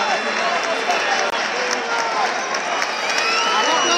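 A short stretch of audio with one clear problem: a block of digital silence from about 1.30 to 1.32 s. For roughly 21 ms the signal drops straight to silence and comes back with no fade, leaving a tiny hole. That length fits a 1024-sample buffer, which points to the program missing its deadline to fill one output buffer and leaving it empty.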